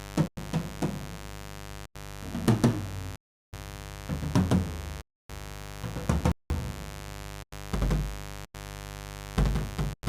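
A steady, raspy mains buzz runs under the whole recording, about 10 dB below the sound itself. It is built on 50 Hz, and switching spikes from a dimmer, rectifier or unshielded line arrive twice per cycle, so the hum carries a dense ladder of harmonics up into several kHz. On a spectrogram this shows as evenly spaced horizontal lines 50 Hz apart across the full length. The audio also drops abruptly into blocks of digital silence at 0.28 s, 1.86 s, 3.16 s, 5.02 s, 6.32 s, 7.43 s, 8.45 s and 9.94 s. Most last about 93 ms, and the others run 186 ms, 279 ms and 372 ms, all whole multiples of that unit, which fits 4096-sample buffers at 44.1 kHz that were not filled in time. In the waveform they appear as flat, near-silent stretches with vertical edges, and on a spectrogram as blank vertical bands.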